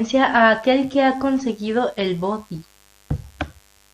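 Mains buzz runs throughout this speech clip: switching spikes twice per 50 Hz cycle add a raspy harmonic buzz reaching several kilohertz, sitting roughly 35 dB below the voice.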